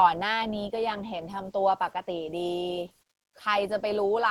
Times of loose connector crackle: none

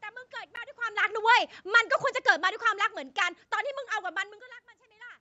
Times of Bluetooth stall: 0.56

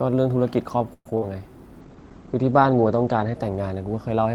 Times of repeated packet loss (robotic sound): 0.93-1.23

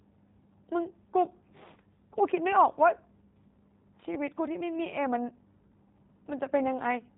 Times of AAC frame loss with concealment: none

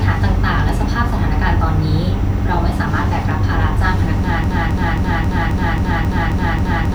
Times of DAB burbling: none

